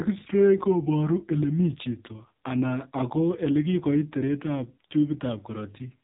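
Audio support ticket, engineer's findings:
AMR narrowband mobile codec, entire clip. Speech heavily buzzy and synthetic; nothing above 3.8 kHz. Spectrogram shows a hard ceiling at 3.8 kHz and smeared harmonics. Vocal-tract model driven by sparse pulses per 5 ms; damage depth fits a low mode near 5.9 kbps.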